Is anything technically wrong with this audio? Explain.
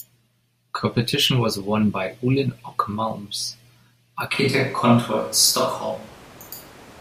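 Yes. From 4.34 s to the end, the speech suddenly turns roomy and hollow with thinner bass, while its level stays about the same. This is a switch to a distant microphone, likely because the close microphone dropped out and a farther one took over. Room noise rises to around 25 dB below the speech. The abrupt change in timbre and noise, rather than a gradual one, separates it from added reverberation or equalisation.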